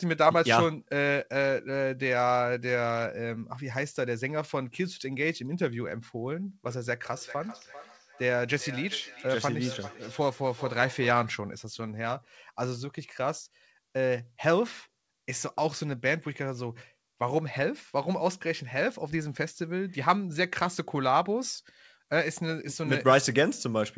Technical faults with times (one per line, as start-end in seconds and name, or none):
6.66-11.41 feedback echo between two devices